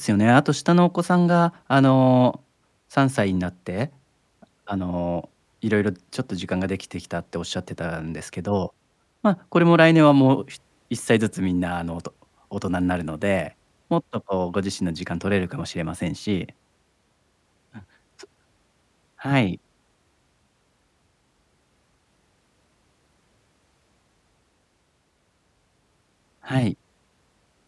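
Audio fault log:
No faults are audible anywhere in this speech recording.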